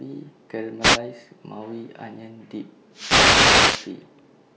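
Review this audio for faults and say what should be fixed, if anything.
Two wireless microphone noise hits break into the speech, a short swish from 0.81 to 0.99 s and a longer burst of static from 2.91 to 3.93 s. The analogue FM link's signal faded as reflected paths cancelled, so receiver hiss rose over the speech. On a spectrogram each hit shows as a broadband noise smear. To prevent it, use diversity receivers with a clear line of sight and well-placed antennas.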